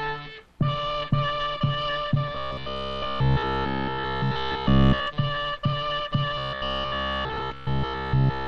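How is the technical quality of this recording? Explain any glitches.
The technical quality is poor in two stretches, from 2.35 to 5.08 s and from 6.38 s to the end at 8.47 s, where the sound collapses into a rigid, metallic buzz pitched at 66.7 Hz. This is robotic sound from repeated short buffers, likely caused by audio arriving too seldom, so a roughly 15 ms slice is replayed over and over instead of fresh material.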